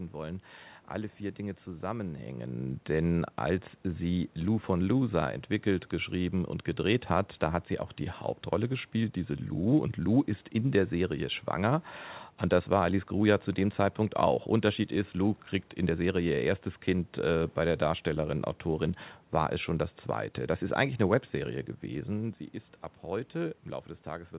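No technical faults can be heard in this speech recording. The sound stops at about 4 kHz, which fits a narrowband telephone codec such as G.711 on the call path, and the level shifts near 2 s and 22 s sound like the talker moving relative to the microphone.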